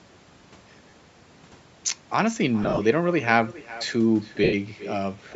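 From start to finish the speech is trailed by an echo with no canceller: a quieter copy, about 17 dB down, returns roughly four tenths of a second later, sounding thinner. The far end is playing the call through a loudspeaker and its microphone sends it straight back. That long gap and the duller tone set it apart from room reverberation, which would blend in at once rather than repeat as a distinct delayed shadow.

Lost LE Audio frames break in three times. At 0.90 s a 30 ms gap becomes a brief noisy smear. From 2.63 to 2.80 s losses totalling 110 ms are scattered, the longest run a few tens of milliseconds, so the sound turns grainy in patches. From 4.44 to 4.54 s a 90 ms loss smears and then fades toward silence. These lengths fit 10 ms frames. Unlike a clean dropout, the decoder fills each gap with the last spectrum given random signs, so the holes sound like hiss rather than clicks or dead air.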